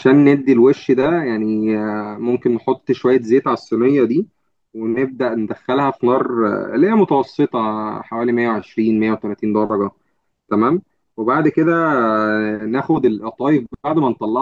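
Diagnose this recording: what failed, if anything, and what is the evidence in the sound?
Nothing failed; no stage of the chain shows a fault.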